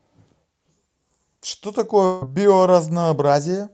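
From 2.05 to 2.24 s the speech breaks into a fading buzz, likely a long network dropout. About 120 ms never returns, unlike a brief concealed packet loss. From 2.25 to 2.59 s a jitter buffer speed-up plays the audio at 111% to shed about 40 ms of delay, rushed but at unchanged pitch, unlike resampling.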